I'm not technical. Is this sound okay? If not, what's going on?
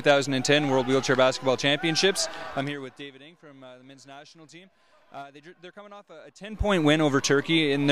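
Yes, this sound is okay, and there's nothing going on that needs fixing.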